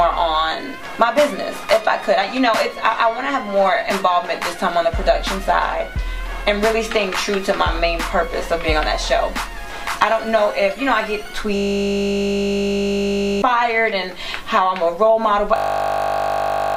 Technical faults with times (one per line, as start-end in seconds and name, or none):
11.56-13.42 system hang loop
15.56-16.76 system hang loop